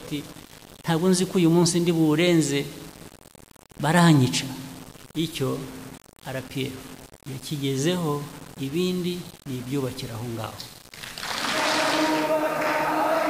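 The audio was likely reduced to very low bit depth without dither, about six-bit rounding, leaving grainy distortion throughout, with quantisation error around 20 dB below the signal.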